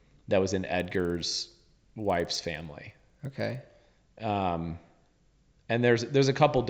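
A resampler restarted on every block runs from 0.75 s, just after "that was in", until 3.7 s. The sample-rate converter, which fits an upsampling from 16 kHz to 48 kHz, processed each block in isolation, so its filter lacked the true neighbouring samples at every edge and left a small error there. These errors recur at 20 Hz, which fits 50 ms blocks, and are heard as a rough, regular buzz riding on the speech.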